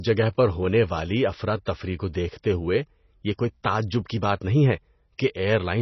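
Throughout, the encoder appears starved of bits, likely from MP3 compression at a very low rate that fits about 24 kbps. It discards everything above 6 kHz and drops weak frequency lines frame by frame, so the speech sounds dull, watery and swirly, with heavy smearing.

At 1.65 s, a pre-echo appears. The codec spread the quantisation noise meant for a sharp onset back across the quiet moment just before it. This produces a brief hiss, about 11 ms long, ahead of the attack, which itself sounds softened.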